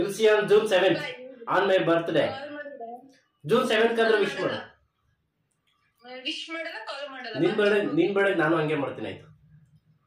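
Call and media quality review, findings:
No findings in this call and media quality review.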